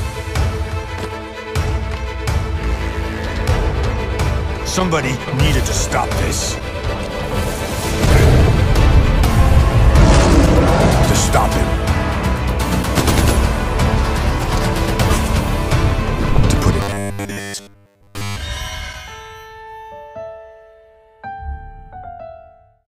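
From 16.81 to 18.36 s the audio becomes a rigid metallic buzz at 100 Hz: robotic sound from repeated short buffers. Audio data likely arrived too seldom, so 10 ms segments were replayed for most of that stretch. A spectrogram shows flat harmonic lines spaced 100 Hz apart, and the waveform shows one cycle copied over and over.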